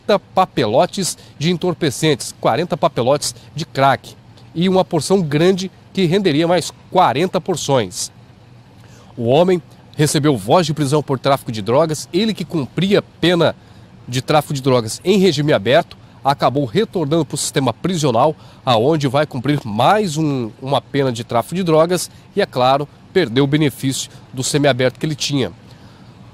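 At about 15.79 s the audio jumps forward by roughly one frame, around 20 ms, because compressed frames were skipped: a chunk of encoded audio was missing or rejected by the decoder as damaged, so playback resumed at the next good frame. The frame length of 23.2 ms fits a typical lossy codec block. Unlike a dropout, no silent gap appears.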